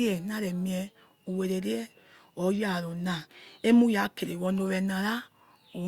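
Nothing in this bit of speech stands out as a technical fault, so there's nothing here to flag.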